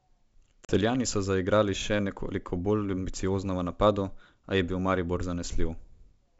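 At 0.65 s the speech drops into a hard-edged silent hole, and when it comes back at 0.73 s, just before "so zaigrali še nekoliko", it returns slightly distorted, settling within tens of milliseconds. This is packet loss on an ADPCM call. Around four packets, about 40 ms of audio, went missing. The decoder's adaptive predictor and step size lost step with the sender's and had to recover. The 64 kbit/s G.722 wideband coding is audible as clear wideband speech.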